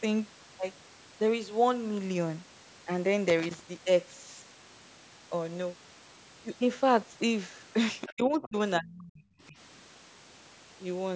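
At 8.07 s, a faint second voice appears for about 0.06 s, roughly 20 dB below the main speech. This is the other side's voice leaking through. The likely cause is a loudspeaker feeding the far end back into the microphone, with the echo canceller leaving a remnant. The same faint scrap returns from 8.42 to 8.48 s, just as quiet and just as brief.

From 8.15 to 8.55 s, the talker's speech drops sharply, by around 30 dB at its deepest. That is speech suppressed in double talk. Both sides were likely talking at once, and the echo canceller turned everything down. A deeper cut follows from 8.79 to 9.23 s, about 40 dB, so the voice nearly vanishes. A shallow dip of about 15 dB comes at 9.48 to 9.55 s. Throughout, the band stops near 8 kHz, as call microphone processing shapes it.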